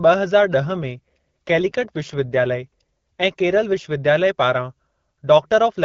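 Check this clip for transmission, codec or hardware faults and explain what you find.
One fault is present, an AMR rate drop. From 0.64 s to 3.93 s the speech turns rougher and more synthetic. The band stays the same, with no gap. A weak radio link pushes the codec to a lower rate, spending bits on error protection. The sound points to a drop from about 12.65 to 8.85 kbit/s, below the lightly coded wideband level around it.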